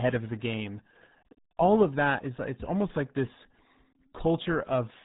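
From start to finish, the speech runs through the RealAudio 14.4 codec. It is an early low-rate codec built for dial-up links. Nothing above about 3.9 kHz survives, so the voice sounds muffled and boxed in. The damage is heavy. Syllables turn gargly and smeared, as if spoken through water. That degree of loss fits a stream squeezed to around 8 kbit/s. The coder throws away most detail to hit that rate.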